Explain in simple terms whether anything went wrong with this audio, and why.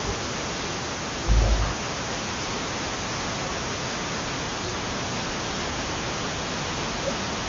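Nothing went wrong with this audio, so there is no fault to explain.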